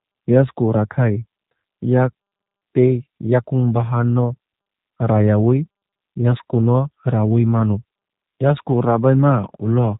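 Throughout the speech, the audio passes through a G.729 codec that rebuilds it from a vocal-tract filter, pitch prediction and sparse pulses, which fits an 8 kbit/s coder. Nothing above 3.8 kHz survives, so the sound is muffled, plainly rough and synthetic.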